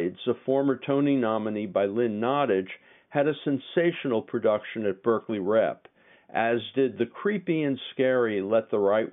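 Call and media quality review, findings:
No faults found.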